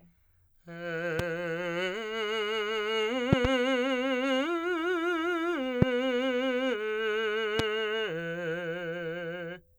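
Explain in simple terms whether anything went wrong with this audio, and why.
Loud pops interrupt this music at 1.19 to 1.22 s, 3.33 to 3.47 s, 5.82 to 5.85 s and 7.59 to 7.62 s. The one at 3.33 s is a double pop, two in quick succession. Each is a sharp, much louder thump sitting on top of the music, which keeps playing underneath. The likely cause is a sudden electrical jolt, such as a plug, switch, static or a driver glitch, briefly pushing the signal.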